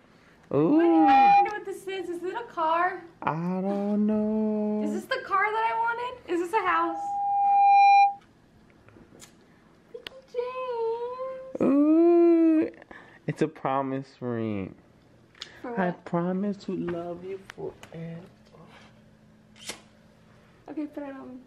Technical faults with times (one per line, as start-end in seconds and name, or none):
0.72-1.56 loudspeaker feedback squeal
6.54-8.20 loudspeaker feedback squeal